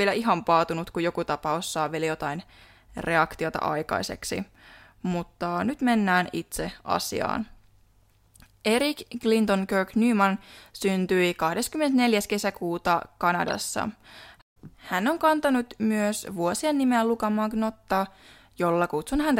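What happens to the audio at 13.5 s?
From 13.48 to 13.55 s, a corrupt frame decoded: about four damaged frames play anyway, misplacing energy into a brief spurious burst rather than a dropout's silence.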